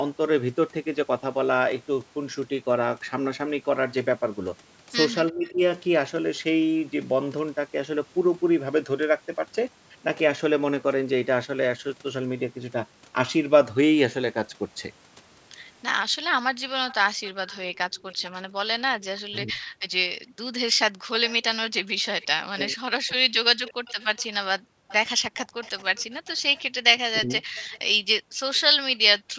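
At 5.31 to 5.61 s, and again at 19.32 to 23.82 s and 27.2 to 27.42 s, the speech dips by up to about 20, 40 and 15 dB. This is speech suppressed in double talk, likely caused by the echo canceller attenuating the talker while the far side also speaks. Unlike gating, the voice itself thins and breaks.

From 16.13 to 21.08 s, at 24.59 to 24.89 s and from 27.93 to 29.37 s, the room background is gated by the echo canceller, dropping by about 40 dB in brief moments before returning.

From 16.89 to 28.57 s an echo leak adds a faint copy of the voice about 20 dB down, delayed by 318 ms. It is a distinct late repeat rather than a loss of level.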